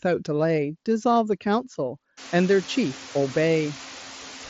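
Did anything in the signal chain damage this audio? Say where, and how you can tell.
Yes. The damage comes from call processing: noise suppressor artifacts run through the whole clip. The suppressor cuts only about 1 dB, so its gain moves are slight. It applies per-band gain frame by frame, lowering bands it judges to be steady noise. The floor dips a little in the gaps and returns under the speech. When the room noise rises by about 24 dB near 2.0 s, the suppressor barely touches it. That noise stays about 19 dB below the speech, band-limited to the mSBC codec's roughly 7.7 kHz ceiling.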